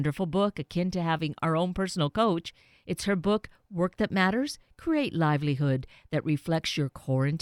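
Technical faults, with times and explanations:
No technical faults detected in this speech recording.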